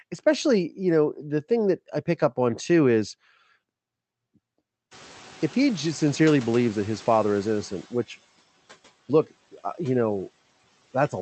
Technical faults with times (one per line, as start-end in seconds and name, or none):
4.91-7.86 noise suppressor catching up